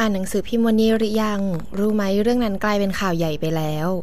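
DC offset runs through the whole clip: the speech waveform sits displaced from zero by about -29 dBFS, wasting headroom and adding steady energy near 0 Hz.

A train of clicks follows from 0.90 to 2.04 s, around fifteen uneven pulses at about 14.2 per second, roughly as loud as the speech, likely from electrical interference or a faulty connection.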